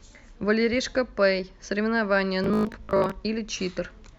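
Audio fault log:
2.44 to 3.12 s, Bluetooth stutter: across roughly two-thirds of a second of speech the wireless link kept dropping audio, so the receiver filled each gap by looping the last short slice it still had. You hear a choppy, machine-gun buzz, worst in a stretch of about 112 ms, and about 355 ms of real audio goes missing in total. When clean data returns, the speech jumps ahead as though it had carried on underneath.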